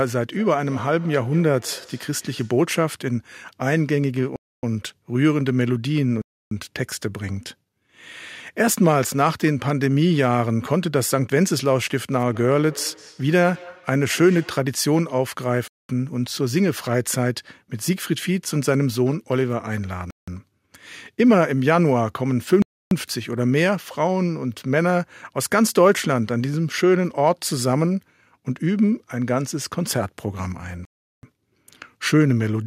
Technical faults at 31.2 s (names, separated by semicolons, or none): Bluetooth stall